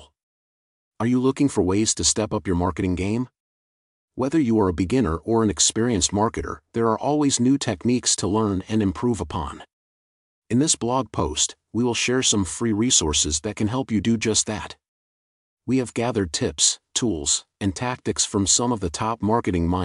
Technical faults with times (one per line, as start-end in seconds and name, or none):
none